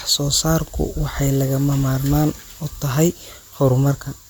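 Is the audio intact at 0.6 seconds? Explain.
No. At 0.6 seconds, as throughout, the speech sounds swirly, smeared and hollow, with blurred attacks. The likely cause is generation loss: about three rounds of MP3 coding, each on a shifted frame grid, compounding noise and spectral holes beyond what a single pass at roughly 128 kbit/s would produce.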